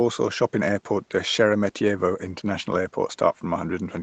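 No technical faults are audible.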